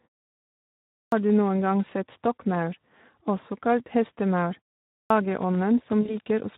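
Throughout, the audio has passed through the Speex codec at a low setting, which fits a bitrate near 11 kbps. With few bits left for the excitation, the speech turns plainly noisy and hoarse, and the upper band becomes a shaped, hissy fill.

At 1.0 s, after a second of silence, the output device is still waking or relocking, so a clipped start after a pause swallows the first 122 ms. The speech begins abruptly, missing its opening sounds. The same fault returns at 4.98 s after a 0.44 s pause, cutting about 124 ms before the sound resumes at 5.10 s.

From 6.01 s to 6.15 s, 40 ms of packets are lost, and VoIP packet loss concealment by the speech codec extrapolates from the last pitch and filter. That gap is filled with stretched sound that fades, and the voice stays thin and distorted until about 6.15 s.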